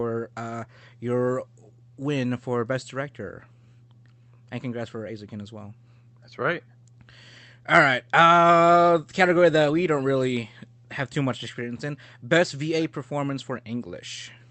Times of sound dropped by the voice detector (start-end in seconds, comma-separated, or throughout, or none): none